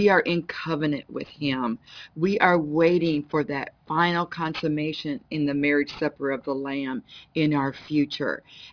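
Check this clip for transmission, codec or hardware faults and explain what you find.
One fault runs through the whole clip: aliasing. The sample rate was cut without an anti-alias filter, which fits a drop from 44.1 kHz to 11 kHz. Content above 5.5 kHz folds back as wrong, unrelated tones, roughly 25 dB down, giving a gritty, metallic edge. Plain band-limiting would only sound dull. This is harsh right up to the band edge.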